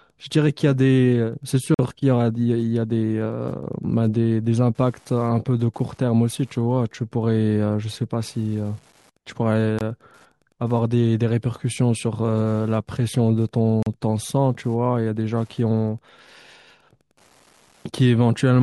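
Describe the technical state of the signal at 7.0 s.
Wi-Fi interference at 7.0 s, as throughout: the circuit rectifies a radio's 102.4 ms beacon, causing ticking about ten times a second, roughly 40 dB below the speech.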